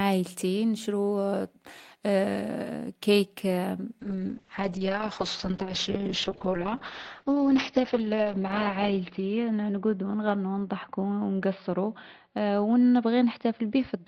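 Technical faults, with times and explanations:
4.01 s to end, call bitrate drop: coarse, muffled sound. The spectrogram loses everything above 6 kHz, consistent with Opus falling from 32 to about 7 kbps.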